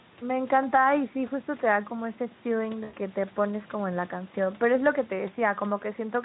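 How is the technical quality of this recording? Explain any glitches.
One glitch stands out, between 2.83 and 2.96 s: VoIP packet loss concealed by the speech codec. About 100 ms of audio went missing, which fits five 20 ms frames. Instead of leaving a hole, the Speex decoder kept repeating its last pitch and spectral shape while lowering the level frame by frame. The result is a smeared stretch that fades, and the sound stays weak for a moment after the audio resumes. A plain dropout would sound different: it would give abrupt silence or a click, not this drawn-out tail. The Speex coding adds slight roughness.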